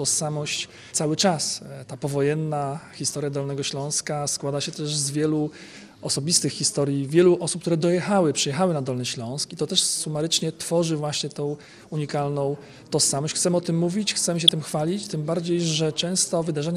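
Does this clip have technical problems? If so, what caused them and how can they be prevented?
Yes. Throughout, the sound is dull and gurgling, with a granular roughness and upper bands flickering in and out. This is plainly audible MP2 compression, likely from too low a bitrate; the damage fits a stream of about 80 kbps. Unlike burbling, it is constant rather than bursting. Encoding at a higher bitrate, or with a more efficient codec, prevents it.

At 14.48 s there is a brief burst of DAB burbling. A very small share of bit errors slipped past error correction and corrupted samples, putting short blips of noise into single sub-bands. Unlike the steady compression dullness, it is a sudden isolated disturbance. Better reception, through a stronger signal or a better-placed antenna, prevents it.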